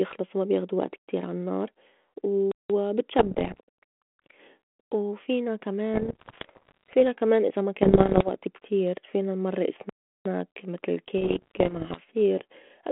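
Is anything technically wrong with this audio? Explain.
Yes. The speech has two problems: dropouts and bursts of decoder corruption.

A playback stall occurs twice, from 2.52 to 2.70 s (about 180 ms) and from 9.89 to 10.26 s (about 360 ms). The likely cause is that the player ran short of data or its output thread was held up, so nothing reached the output until it caught up. Each time the speech cuts off abruptly in mid-flow to silence, then resumes.

Bit errors on an ADPCM link damage the sound at 3.18 to 3.60 s, 5.94 to 6.95 s, 7.82 to 8.29 s and 11.18 to 12.01 s. Roughly one or two bits in a hundred arrive flipped, somewhat fewer in the last stretch. Because each corrupt bit knocks the decoder's step size and prediction off track, the damage persists for milliseconds beyond the error. This produces pops, gritty bursts and brief jumps in level over the telephone-band sound, which fits 32 kbit/s G.726 passing roughly 150 Hz to 3.4 kHz.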